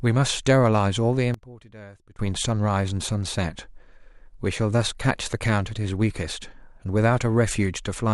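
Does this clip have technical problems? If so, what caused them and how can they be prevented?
Yes. One channel inverted, from 1.34 to 2.19 s: the speech drops by about 22 dB to a faint copy, then returns at full level. The likely cause is one stereo channel flipping polarity for that stretch, so when the two channels are summed to mono the centred voice cancels and only their faint difference remains. Checking polarity on every channel and monitoring a mono fold-down during recording and mixing would prevent it.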